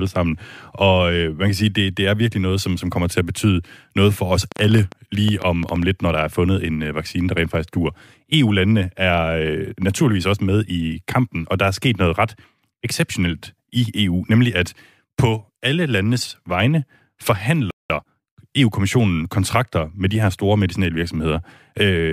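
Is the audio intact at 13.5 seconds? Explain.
Yes, the speech at 13.5 seconds comes through intact, with no dropout, click, distortion or other fault at that point.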